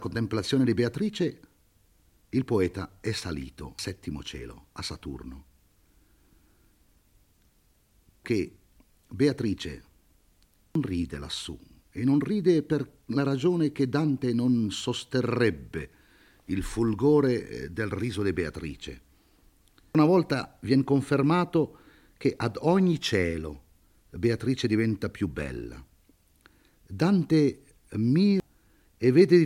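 Damaged data in the compressed stream produces brief blips at 3.79, 8.25, 10.75, 19.95 and 28.4 s, where the decoder loses frame sync.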